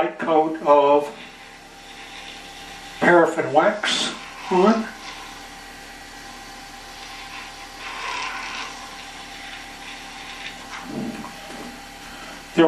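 No dropouts, clicks, distortion or timing errors turn up anywhere in the recording.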